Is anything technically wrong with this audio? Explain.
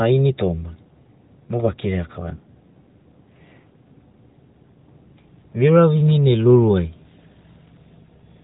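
No, nothing in this speech clip is technically wrong. It has passed through an AMR narrowband mobile codec, so nothing above 4 kHz comes through and the coding leaves only a light trace, which fits the codec's top 12.2 kbps mode.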